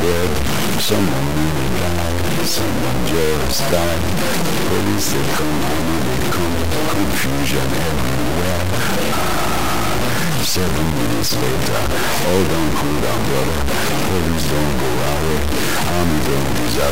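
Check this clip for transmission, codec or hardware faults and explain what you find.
There's one fault, and it runs the whole way through: low bit depth without dither. Audio was likely truncated to about 3 bits with no dither, so the rounding error tracks the signal, leaving grainy distortion that sits roughly as loud as the sound itself.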